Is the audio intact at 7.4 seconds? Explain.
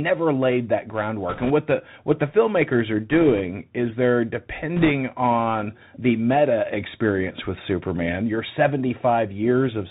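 No, not at 7.4 seconds. The whole clip runs through a Bluetooth CVSD headset codec, so that moment carries the same damage as everything else. CVSD sends one bit per sample, just up or down, at a 64 kHz rate that fits a 64 kbps link, with a step size that adapts. Nothing above 4 kHz gets through, so the speech sounds boxed in. Loud high sounds outrun the step and distort, s sounds turn scratchy, and a granular hiss sits underneath.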